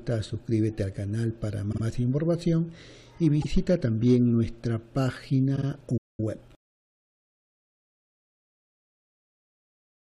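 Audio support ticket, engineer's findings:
Repeated frames, three spots. Same 52 ms block replayed, so a quick stutter.
1.71 to 1.82 s: block played twice extra, adds about 105 ms.
3.41 to 3.46 s: one extra play, adds 52 ms.
5.55 to 5.66 s: two extra plays, adds about 105 ms.
Block size fits a pair of compressed frames getting rewritten or resent upstream of the decoder.

Playback stall, 5.97 to 6.20 s. Sound just cuts out mid-flow for about 210 ms, then picks up again. Points at the player's output path. Likely cause is the buffer running dry, or the playback thread getting blocked, so nothing reached the device until it recovered.

Time-compressed catch-up, 6.20 to 7.58 s, straight after the stall. Audio runs hurried at about 1.15x but pitch holds. That's the player trimming its backlog by cutting out small slices and cross-fading over the gaps until it's back in step.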